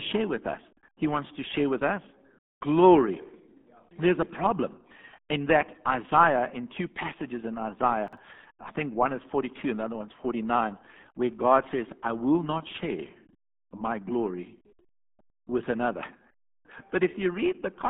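Speech heard through the RealAudio 14.4 codec for its whole length, with heavy codec damage: nothing above 3.8 kHz, a 200 Hz to 3.5 kHz line band, and a muffled, gargly quality consistent with an 8 kbit/s dial-up stream. Between 8.08 and 8.17 s, chunks out of order jumble the sound: a 46.44 ms chunk plays one chunk late, leaving three hard joins.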